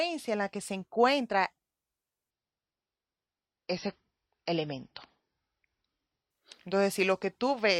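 From 2.31 s to 6.31 s the speech drops abruptly, with no gap, to an adaptive stream at a lower bitrate, consistent with MP3 falling from 128 to 24 kbit/s. The spectrogram shows a flat ceiling at 5.9 kHz, and the sound turns dull and swirly with codec artefacts.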